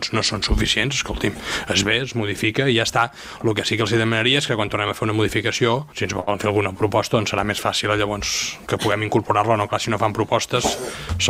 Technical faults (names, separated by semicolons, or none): short stall from a late packet; short concealed packet loss; jitter buffer slow-down